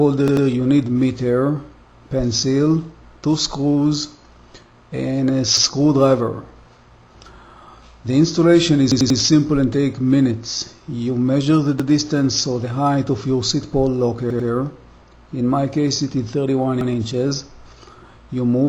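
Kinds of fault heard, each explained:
repeated buffer: six short stutters where a 93 ms slice replays one to three times with hard joins, as late audio made the device repeat its buffer.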